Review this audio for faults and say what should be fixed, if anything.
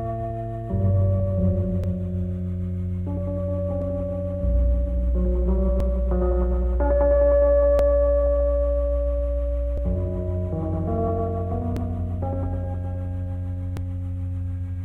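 Overlap between stream segments produces short clicks or skips at 1.84, 3.82, 5.80, 7.79, 9.78, 11.77 and 13.77 s, one near each boundary of 2-second segments. Each time, two adjacent segments claim the same stretch of time, and the player trims the doubled part even though that audio was never repeated. A few milliseconds of real sound vanish, and the waveform jumps from one point to a later one. Unlike a dropout, no silence or gap is inserted. The sound simply lurches forward, and the steady 2-second spacing points to segment boundaries rather than random packet loss. To prevent it, the packager should compute segment timestamps from exact sample counts so consecutive segments abut precisely instead of overlapping.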